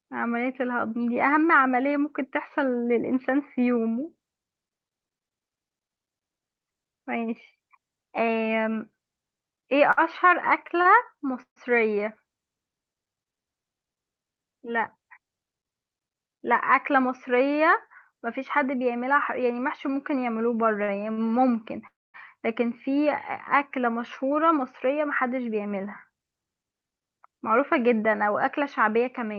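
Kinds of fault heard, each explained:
Repeated stalls (stutter): Between 9.91 and 12.03 s the speech drags and catches through five brief holds, the longest 142 ms, adding 266 ms in all with nothing lost. Packets kept arriving late, so the jitter buffer emptied repeatedly and the last sound was extended each time.
Jitter buffer speed-up: The speech sounds hurried at unchanged pitch, running 11% fast from 14.97 to 15.81 s and 7% fast from 23.94 to 27.07 s. The buffer held more audio than its target, so the receiver cut short pitch-period slices, roughly a tenth and then a fifth of a second.
Short stall from a late packet: At 20.83 and 21.12 s a sound is held too long, by 48 and 50 ms, with a slight buzz or dip. Each time a packet missed its slot, the buffer ran dry and the receiver stretched the last sound until that packet arrived.
Call audio freeze: At 21.87 s the sound stops for 0.27 s, mostly silence after a short fading tail, then resumes exactly where it left off. 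The likely cause is packets held up in transit, emptying the jitter buffer so the receiver had to fill the wait.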